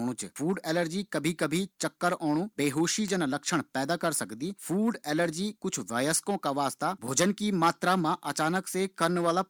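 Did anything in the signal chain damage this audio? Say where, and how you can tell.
Yes. An electrical switching spike sits at 3.08 s in this speech: a single sharp snap, over in a few milliseconds and peaking at around -20 dBFS, laid on top of the talker rather than replacing it. That instant onset and broadband crack point to the analogue wiring stage, the likely cause being a nearby switch, motor or static discharge arcing and inducing a brief transient into the audio line before conversion.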